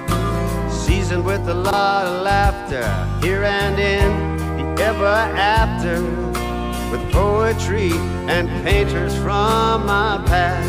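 At 1.64 s to 1.73 s, chunks play out of order. One block of about 21 ms arrives three blocks late, so the short stretch plays in the wrong order. Nothing is missing, but the sound jumps briefly and there are three hard joins. On the waveform, three abrupt discontinuities fall across the span, the first two about 64 ms apart and the last two about 21 ms apart. On a spectrogram, the content between the joins is visibly shuffled.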